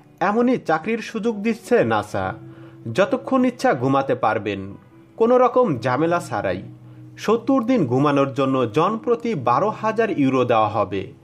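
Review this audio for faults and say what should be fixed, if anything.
No faults; nothing to fix.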